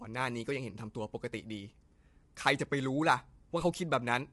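From start to finish the speech sounds rough and grainy, with a noisy haze filling the gaps between the pitch harmonics, and nothing is present above about 11.6 kHz. The most likely cause is low-delay AAC compression of the AAC-ELD kind used for calls: its short frames cannot separate closely spaced harmonics cleanly, and at a rate around 32 kbps the bit budget runs thin, consistent with this plainly audible level of damage.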